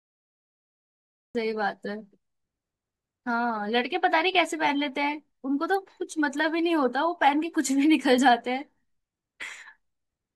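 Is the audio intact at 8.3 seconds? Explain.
Yes, the speech at 8.3 seconds is intact, with no fault to be heard at that moment.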